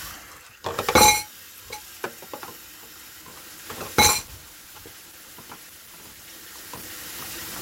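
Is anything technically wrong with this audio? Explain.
Yes. Adaptive stream at a lower bitrate, from 3.22 s to the end: the player switched to a cheaper encoding partway through, as happens when a connection slows, and the change fits a step down from Opus at about 64 kbit/s to about 16 kbit/s. The quality drops abruptly with no gap. After the switch codec artefacts rise for the rest of the sound.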